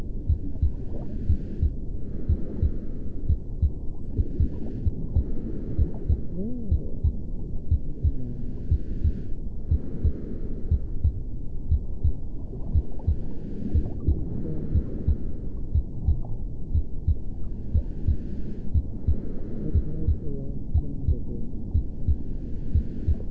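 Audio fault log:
4.02 s, skip ahead: playback jumps forward with no gap, and roughly a second of sound never plays. That much audio was dropped, in transit or by a jitter buffer that overflowed while later audio was already waiting. The two sides of the cut are joined almost directly, so the sound lurches from one moment to a point about a second further on, with nothing to bridge the two.
4.07 to 6.79 s, jitter buffer speed-up: for about 2.7 s the sound runs at 121 % of its normal rate with its pitch unchanged, so it comes across as hurried. The buffer was holding more audio than its target, and to bring the delay down the receiver cut out short pieces one or a few pitch periods long, one after another, removing about half a second in total before the pace settles back to normal.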